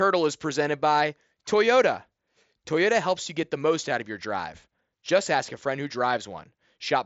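There are no technical faults to describe at any point in the speech.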